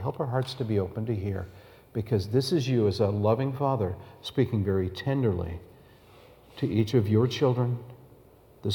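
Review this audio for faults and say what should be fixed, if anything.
No faults are audible, so nothing needs fixing.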